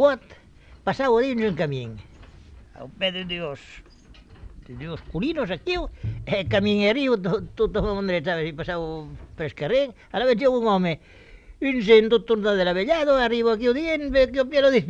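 No technical faults can be heard anywhere in the clip. Nothing in the audio interrupts, distorts or degrades the sound at any point.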